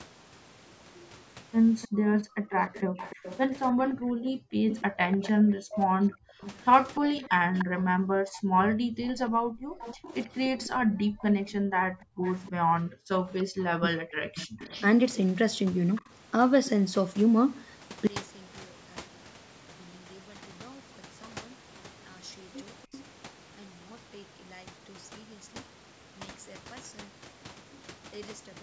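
From 0.96 to 16.02 s a faint, delayed copy of the speech trails the talker by about 0.3 s (298 ms), sitting roughly 20 dB below the main voice. This is an echo leak. The likely cause is an echo canceller on a loudspeaker end that failed to remove everything its microphone picked up, so the residue was sent back down the line.

Between 1.88 and 4.13 s the room sound behind the speech dips sharply, by up to about 35 dB, for roughly 0.7 s in total, then comes back. This is background gated by the echo canceller. While the loudspeaker was active, the canceller pulled the microphone level down hard and released it afterwards.

From 2.34 to 9.65 s the talker's own speech drops out in pieces, by as much as 40 dB or so, adding up to around 0.7 s. This is speech suppressed in double talk. With both sides speaking at once, the canceller likely could not tell the near talker from the loudspeaker echo, so it turned both down.

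The background gating returns from 6.18 to 9.01 s, dipping about 40 dB for roughly half a second in total. It comes back again from 10.75 to 13.12 s, where the dips reach about 39 dB and last around 1.5 s in all.

Double-talk suppression recurs from 13.1 to 14.64 s, again cutting the talker by up to roughly 40 dB for about 0.7 s combined.

A brief echo leak reappears from 22.82 to 23.03 s, with the same 0.3 s delay and about 25 dB below the speech.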